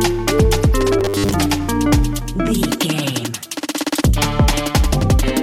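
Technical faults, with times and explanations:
0.99–1.34 s, robotic sound from repeated short buffers: for about a third of a second the sound collapses into a rigid, metallic buzz at 100 Hz that only loosely follows the underlying audio. The likely cause is fresh audio arriving too seldom, so playback kept looping a 10 ms slice in place of most of the real material. That fixed repeat rate stamps its own steady pitch onto everything in the stretch.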